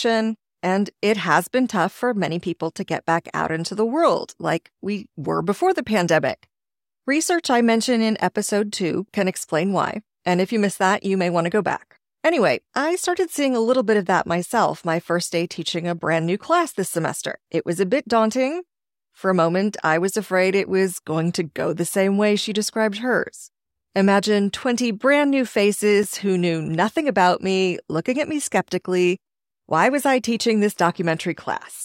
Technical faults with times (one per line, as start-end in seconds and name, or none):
26.03 block of digital silence